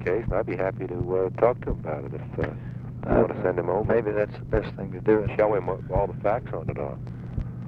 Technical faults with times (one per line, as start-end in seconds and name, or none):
none